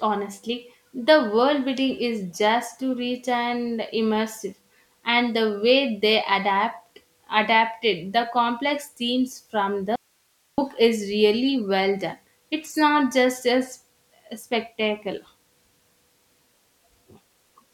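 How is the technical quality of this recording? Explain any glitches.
One glitch stands out: an audio dropout to a faint residue from 9.96 to 10.58 s. The speech signal was likely lost upstream while the path after the break stayed live, so for 0.62 s the speech cuts out abruptly and leaves only hiss, roughly 45 dB below the speech level.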